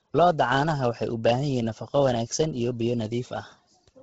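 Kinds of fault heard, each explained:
Bluetooth LC3 compression: the speech sounds breathy and grainy throughout, with nothing above 7.8 kHz, likely from heavy LC3 coding that fits about 16 kbps with 10 ms frames. A spectrogram shows a hard ceiling at 7.8 kHz and smeared, noise-filled upper bands.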